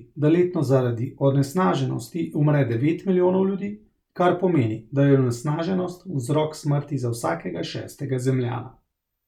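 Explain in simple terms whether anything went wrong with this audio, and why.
Nothing went wrong with the recording: the speech signal is intact throughout, with no technical faults anywhere in it.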